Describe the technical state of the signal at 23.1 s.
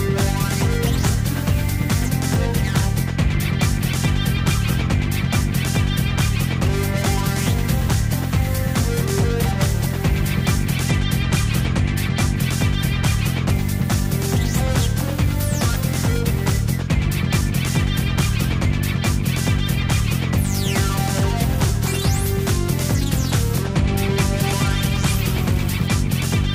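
At 23.1 s the sound is inside a Bluetooth SBC bit pool drop running from 22.5 to 26.05 s. The link starved the encoder of bits, so upper sub-bands went empty and the rest were coarsely quantised, leaving dull treble under a gritty noise. This fits a bit pool falling from around 31 to 16. A spectrogram would show the highs cut away abruptly with grainy speckle in the remaining bands.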